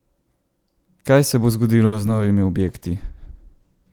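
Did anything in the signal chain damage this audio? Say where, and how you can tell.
Yes. Just after "se bo", from 1.85 to 1.94 s, a sound is held too long, with a slight buzz or dip. That is a short stall from a late packet. A packet arrived late, the jitter buffer ran dry, and the receiver stretched the last sound for about 70 ms before resuming.

Between 2.06 and 2.17 s there is a brief smear. This is short concealed packet loss on the network. About 20 ms never arrived in time, and the decoder covered the gap by extending the preceding sound before blending back.

From 2.62 s to the end, the sound turns rough and watery and loses its top end. This is a call bitrate drop at the codec stage. The bandwidth estimate fell, and the encoder went from 40 to 17 kbps, staying at its lowest for about 1.3 s.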